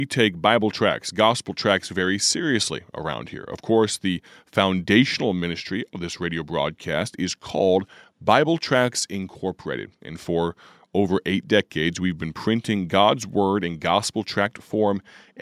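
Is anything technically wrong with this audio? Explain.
No, nothing technically wrong can be heard here.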